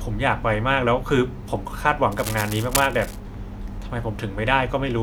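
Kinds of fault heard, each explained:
Cable scratch noise: from about 2.1 to 3.2 s a ragged, crackly rustle rides over the speech, fairly loud and not far under it. That's most likely a worn lead or connector being nudged, its contact flickering and spitting noise into the signal.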